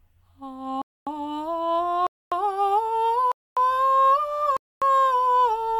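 The music arrives in one-second chunks with silence inserted between them, a gap between chunks of 250 ms at each join: 0.82–1.07, 2.07–2.32, 3.32–3.57 and 4.57–4.82 s. Nothing is lost, but the music stops dead at every join, leaving hard-edged holes at a steady rhythm.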